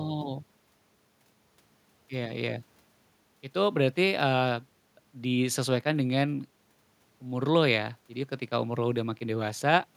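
No technical faults can be heard in the speech.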